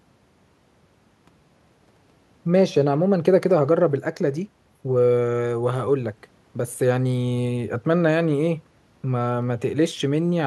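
No technical faults can be heard anywhere in this speech recording. There is nothing to place on a timeline and nothing that calls for a fix.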